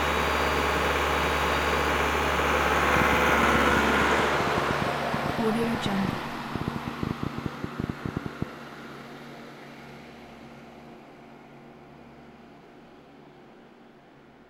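A train of clicks runs from 2.97 to 8.43 s: around fifty near-identical pulses at about 8.6 per second, spaced irregularly and standing roughly 15 dB above the sound. They are heard as uneven ticking that carries on through pauses, likely caused by interference from nearby equipment or a faulty connection or power supply.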